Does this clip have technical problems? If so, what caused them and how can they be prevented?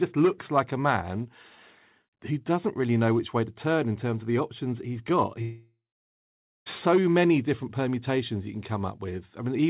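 Yes. After "the options he's got", a long network dropout at 5.42–6.68 s: the last sound fizzles out, then about 0.85 s of silence, and it resumes at "so many different permutations" with that stretch gone. The likely cause is lost packets on the call link, heard through the narrowband phone-style path that stops at 4 kHz. A steadier connection, such as wired rather than Wi-Fi, or a codec with forward error correction would help prevent it.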